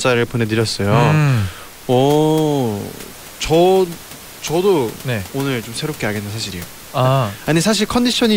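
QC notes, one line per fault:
No technical faults are present in this speech recording; the only background sound is the room's own noise, sitting about 20 dB below the speech.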